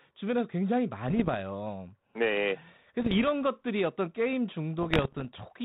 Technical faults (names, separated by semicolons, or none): bit errors on an ADPCM link